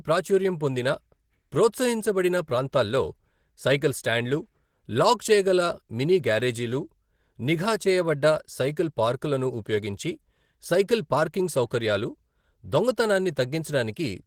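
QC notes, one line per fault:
Throughout: Opus voice compression. The speech has a coarse, slightly hoarse and robotic texture, and the damage is plainly audible. The codec is running in hybrid mode. A linear-prediction layer carries the band below 8 kHz and a transform layer covers the air above it, up to about 20.4 kHz. The excitation is coded too coarsely to sound natural, which fits a rate near 16 kbps with 20 ms frames.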